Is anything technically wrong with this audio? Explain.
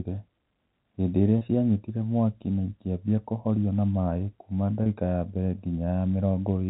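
Yes. At 1.38 to 1.41 s and again at 4.83 to 4.86 s the speech briefly turns into a held, slightly buzzy tone for about 30 ms before carrying on. This is packet loss with pitch repetition: each gap fits a single lost packet, and the receiver filled it by looping the last pitch period it had, which is why you hear a brief sustained buzz rather than a click or a hole. The telephone band limit at 4 kHz from the G.711 coding is present throughout.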